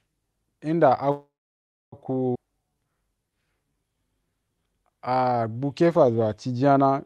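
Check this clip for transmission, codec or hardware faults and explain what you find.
Three transmission faults are audible in this speech, passed through an Opus-style call path whose spectrum stops near 12 kHz.

From 1.11 to 1.94 s a call audio freeze, likely from delayed packets draining the jitter buffer, stretches the last sound into a fading buzz, then about 0.63 s of flat silence in the waveform.

At 2.34 to 2.37 s a skip ahead drops roughly 0.4 s, joining two stretches almost directly; the spectrogram shows an abrupt vertical seam.

From 2.43 to 6.28 s a jitter buffer slow-down repeats pitch periods, adding 388 ms and running at 90% speed with unchanged pitch, visible as horizontally stretched harmonics.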